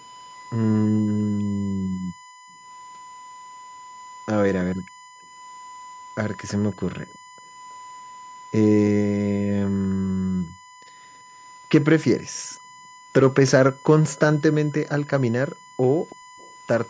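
A USB whine runs through the whole recording: a steady tone at 1 kHz, sitting around 20 dB below the speech. The USB bus draws current in 1 ms frames, and that periodic load is getting into the audio path through the power or ground. It sounds like a thin, unwavering whistle under everything. On a spectrogram it is a hard horizontal line at 1 kHz that continues straight through pauses. The band above 8 kHz is empty, as expected from call microphone processing.

From 1.99 to 7.37 s, and again from 10.51 to 16.36 s, the room background is gated by the echo canceller. While the far-end loudspeaker is active, the canceller clamps the microphone hard, by as much as about 40 dB. The ambience ducks out in brief holes that add up to roughly a second in each stretch, then comes back. A waveform shows the noise floor collapsing to near flat in those spots. A spectrogram shows vertical gaps in the background texture.

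An echo leak sits on top of the gating, from 6.48 to 7.74 s and from 11.37 to 16.51 s. It is a faint repeat of the speech arriving 325 ms late, around 25 dB down, so it comes across as a delayed shadow of the speech. The likely cause is a speakerphone at one end whose echo canceller didn't fully remove its own loudspeaker output. On a spectrogram the harmonic patterns reappear as faint copies shifted a third of a second to the right.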